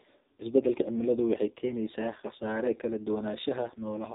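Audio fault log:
Throughout: AMR narrowband mobile codec. Heavily buzzy, synthetic speech with nothing above 3.8 kHz, which fits a low-rate AMR-NB setting around 5.9 kbps.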